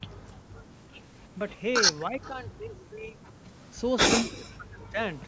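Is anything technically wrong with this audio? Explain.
Yes, there are echo-canceller faults. From 0.0 to 1.01 s, background gated by the echo canceller: the canceller clamps the microphone while the far end plays, so room sound drops about 20 dB.

Speech suppressed in double talk shows up at 1.35 to 1.39 s, 2.08 to 3.2 s and 4.31 to 4.99 s. The voice dips briefly by about 10 dB, then by roughly 20 dB, then by around 40 dB, likely because the canceller can't tell the talker from echo. The call's microphone processing caps everything around 8 kHz, which is expected.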